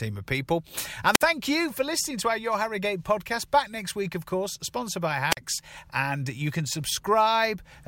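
At 1.12 to 1.22 s, after "of people", and at 5.30 to 5.37 s, after "of course sponsored by", the speech suffers a wireless microphone squelch dropout: the fading radio signal trips the receiver's mute for about 53 ms and 44 ms, leaving a brief hiss burst then a near-silent gap, visible as a broadband smear and a near-empty spectrogram column.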